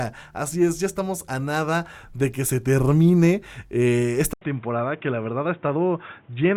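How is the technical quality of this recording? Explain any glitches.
The recording has one clear fault: at 4.33 s, just after "que se termine eh", the input appears switched to a poorer device and stays that way to the end. An 80 ms gap of silence marks the switch, most likely the system moving to another microphone or a headset call profile. Afterwards nothing above 3.8 kHz gets through, so the speech turns dull and boxy, drops a few dB in level, and carries a new noise floor about 30 dB beneath it.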